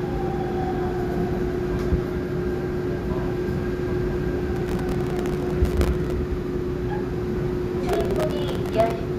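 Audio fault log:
4.56–6.12 s and 7.89–8.91 s, processor overload crackle: dozens of very short buffers, around a millisecond or two each, miss their deadlines and repeat stale audio, so hard-edged fragments pile into a gritty crackle.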